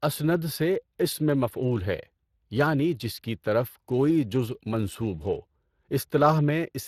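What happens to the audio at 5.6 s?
At 5.6 s the speech is still passing through the Speex codec, which degrades the whole clip. This CELP coder rebuilds speech from a vocal-tract model and a coded excitation signal, and at a bitrate that sounds like roughly 22 kbps the excitation is only coarsely captured. The result is plainly audible: the speech has a grainy, hoarse, slightly synthetic texture, and nothing remains above 15.3 kHz.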